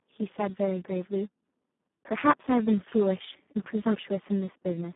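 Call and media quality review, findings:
Speex codec damage across the whole speech clip: hoarse, noisy, edging into robotic. Very starved excitation, consistent with a Speex mode around 4 kbps. Band limited to roughly 150 Hz to 3.5 kHz, nothing above 3.8 kHz. Heavy CELP coding artefacts throughout, so worth checking the call's codec negotiation.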